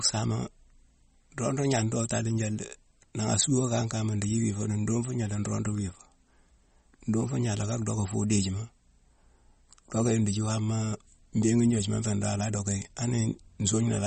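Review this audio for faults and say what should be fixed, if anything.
MP3 compression runs through the whole clip: nothing survives above 8.4 kHz, and the speech has a plainly audible watery, swirling texture with smeared consonants. This likely comes from an encoder starved of bits, consistent with roughly 32 kbps, cutting treble and switching weak frequency lines on and off between frames. To prevent it, keep the original uncompressed or lossless recording, or encode at a much higher bitrate.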